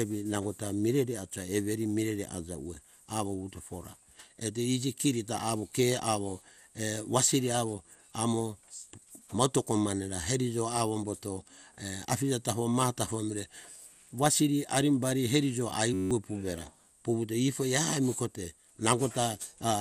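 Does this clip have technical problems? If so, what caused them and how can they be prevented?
Yes. MP2 compression, likely the cause of the dull, gurgling, granular texture throughout this speech, with nothing above 15.1 kHz; too few bits left upper sub-bands switched off and the rest coarsely quantised, consistent with about 80 kbps. Prevent it by encoding at a higher bitrate or with a more efficient codec.

System hang loop from 15.94 to 16.11 s: the computer froze while the sound hardware kept replaying a 10.67 ms buffer, giving a buzz near 94 Hz and losing roughly 150 ms, which fits a 512-sample buffer. Prevent it by fixing the stalling driver or process and using larger audio buffers.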